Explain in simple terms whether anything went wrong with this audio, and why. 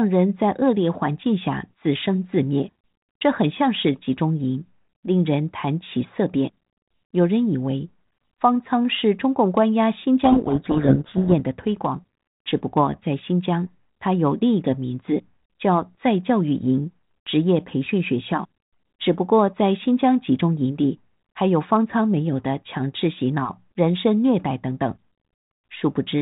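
From 10.24 to 11.40 s the speech is buried under harsh, grinding distortion: a codec payload misread. The phone-style G.726 decoder read its code words with the bits in the wrong order. Unlike a dropout, sound keeps coming, and unlike ordinary coding hiss, it stops abruptly once reading is correct again.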